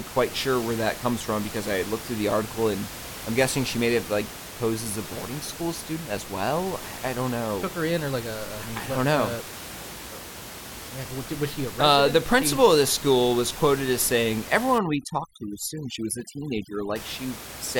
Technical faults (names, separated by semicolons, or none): overdone noise removal